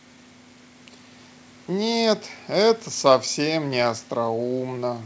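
Nothing is technically wrong with this speech clip.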